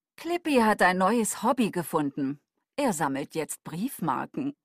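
Nothing stood out as a technical fault on listening to this audio.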